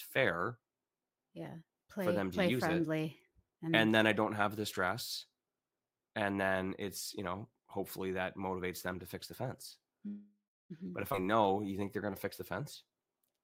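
At 10.07 s the speech stalls until 10.72 s, which sounds like a call audio freeze, likely from packets held up in transit so the jitter buffer ran dry. The last sound trails off as a fading buzz into about 0.31 s of silence, then picks up exactly where it stopped, with nothing lost, just about 0.63 s of extra delay.

At 11.12 to 11.15 s there's a skip ahead. Playback jumps forward, dropping around a fifth of a second of speech. The two sides are joined with only a tiny 12 ms bridge, so it comes across as an abrupt splice rather than a gap.

Straight after, from 11.22 to 13.26 s, there's a jitter buffer slow-down. The receiver repeated pitch periods and bits of pauses to rebuild its reserve, so the speech runs at about 90% speed with unchanged pitch. Sounds are drawn out, and about 0.2 s is added overall.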